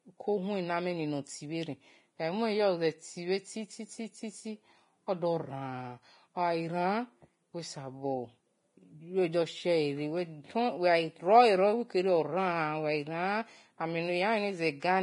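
Speech runs throughout with heavy Vorbis compression damage, likely from a low-bitrate encode around 28 kbps. Nothing survives above 10.5 kHz, the treble turns hissy and grainy, and attacks blur. A spectrogram shows a flat ceiling at 10.5 kHz with speckled, noise-like upper bands.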